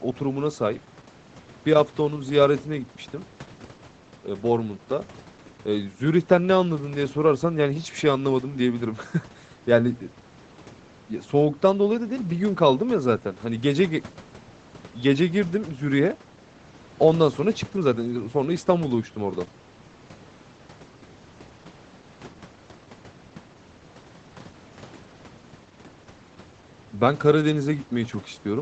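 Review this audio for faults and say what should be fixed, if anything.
Nothing needs to be fixed; reviewing this audio turns up no faults.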